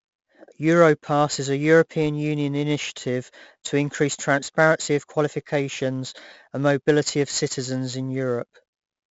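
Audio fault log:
throughout, 4-bit ADPCM compression: heavy gritty hiss tracks every loud stretch of speech, and sharp onsets distort because each sample is a coarse 4-bit step from a prediction whose step size lags attacks. Nothing above 7.7 kHz, which fits 64 kbps at 16 kHz.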